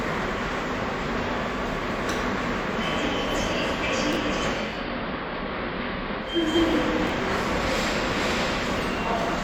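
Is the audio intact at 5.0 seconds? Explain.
No. From 4.47 to 6.59 s the sound turns dull, drops about 4 dB and gains faint hiss well below the signal. This is digital radio blending to analogue: the receiver lost the digital stream and cross-faded over 400 ms to the station's AM broadcast.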